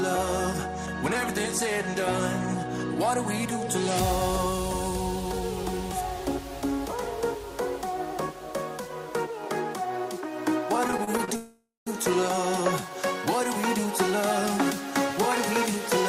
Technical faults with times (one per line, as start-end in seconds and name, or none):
10.87-11.30 repeated stalls (stutter)
11.36-11.88 call audio freeze